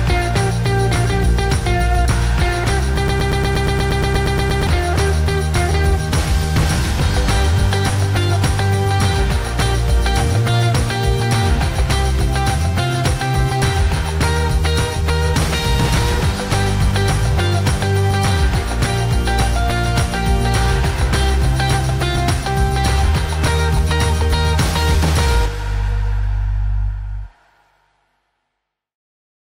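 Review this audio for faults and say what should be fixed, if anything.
A broken-record loop runs from 3.08 to 4.67 s: a fragment of about 0.12 s repeats exactly, 13 times back to back, and the audio due in that span is lost. The likely cause is a stalled player or stream re-sending its last buffered piece. Unlike an echo, the repeats are identical and don't decay. To prevent it, make the playback or streaming path output silence on a stall instead of replaying stale buffer contents.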